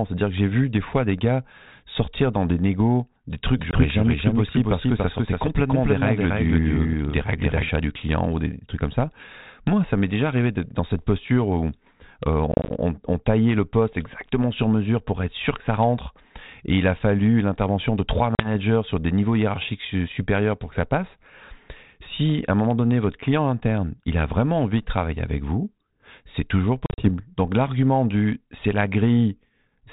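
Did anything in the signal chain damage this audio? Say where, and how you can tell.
Yes. A doubled audio track runs from 3.55 to 7.69 s: a second full-band copy of the speech, about as loud as the original, trails it by about 300 ms with no decay or room colour, and it cuts in and out abruptly at those edges. That points to the editing or storage stage, most likely two copies of the same recording left out of step, rather than to any acoustic echo.

Packet loss on an ADPCM call hits the network stage at 3.71 s (about 20 ms gone), 12.52 to 12.70 s (about 100 ms in scattered gaps, longest 30 ms, before "on taillait le poste"), 18.35 to 18.50 s (about 40 ms, between "fallu l'intervention de trois" and "sur des niveaux hiérarchiques") and 26.86 to 27.09 s (about 100 ms, longest gap 40 ms, after "avec vous c'est toujours"). Each gap is a hard-edged silence, and afterwards the G.726 decoder's predictor and step size no longer match the sender's. 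The speech therefore returns slightly distorted before settling within tens of milliseconds.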